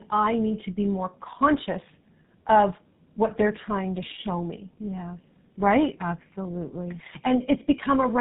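Throughout the speech, the sound carries tandem speech coding: two low-rate speech coders in a row, with the audio decoded and re-encoded at each hand-off, most likely a G.729A leg followed by GSM full rate, joined by a plain G.711 link. Nothing reaches above 3.8 kHz. The second coder models already-distorted speech, so roughness, muffling and warble stack up. A single coder's artefacts would sound milder and less smeared than this compounded grit.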